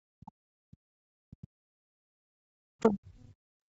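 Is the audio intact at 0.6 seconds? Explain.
No. From 0.0 to 0.8 s the echo canceller likely mistook overlapping talk for its own loudspeaker echo and clamped down on both, so this is speech suppressed in double talk. The voice drops away by roughly 40 dB at its deepest, across most of that opening stretch.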